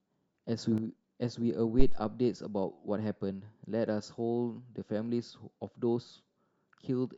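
A sudden gain jump arrives at 0.58 s and holds until 0.78 s. The level of the speech and the background noise steps up together by about 6 dB with no fade, and drops back just as abruptly. That pattern likely comes from a digital gain setting or bit shift applied instantly rather than ramped. Because the gain changes between one sample and the next, there is no smooth transition, and the whole signal, noise floor included, lurches louder for that short stretch.

A phantom power thump follows at 1.79 s, lasting until about 2.03 s. It is a deep, low thud whose body dies away quickly, with a decay of around 54 ms. This is the signature of a supply being switched on a live input. The voltage step passes through the coupling capacitors and reaches the recording as a low-frequency pulse, not as part of the speech.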